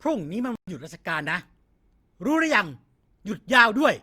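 At 0.56 s the speech cuts out abruptly. Silence holds until 0.68 s, a gap of 120 ms. Then the sound picks up again. This is a playback stall. The likely cause is a player that ran short of buffered data, or whose audio thread was held up, so nothing reached the output for that moment. It sounds like a brief dropout in mid-flow rather than a natural pause. The silence has hard edges and no fade.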